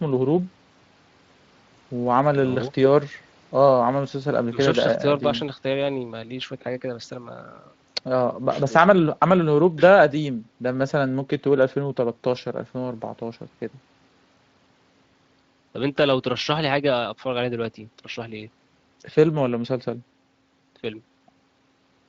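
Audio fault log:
No faults are heard in this speech clip. The Speex codec path leaves only a light coding texture, consistent with a mid-to-high quality setting.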